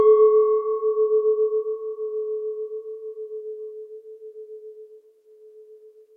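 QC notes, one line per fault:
Nothing here needs flagging; I found no faults anywhere in this sound.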